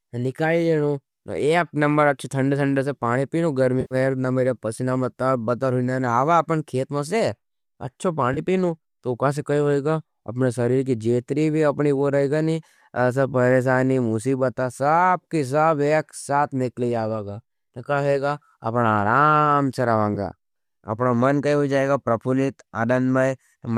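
AAC frame loss with concealment occurs at 3.81–3.95 s after "ठंडा पानी पी लू", at 8.34–8.39 s between "खेत मे से अपनो" and "पीवू औ का सा", and at 20.15–20.18 s after "आराम से". The decoder, likely low-delay AAC, refills the missing frames from the last good spectrum, producing brief smeared, noisy patches. A spectrogram shows blurred harmonics there.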